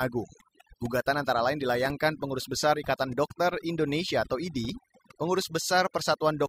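From the first moment to the last, the speech carries overdone noise removal. A noise reducer was pushed too hard, so any frequency band sitting close to its idea of the noise gets pulled way down or shut off entirely, and the softer parts of the voice get caught in that too. You hear it as a background that drops away and breaks up into little twinkling specks.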